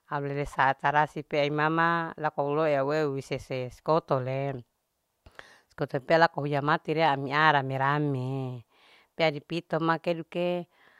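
Nothing technically wrong can be heard in this speech recording: the signal holds steady throughout, with no interruptions, level problems or added disturbances at any point.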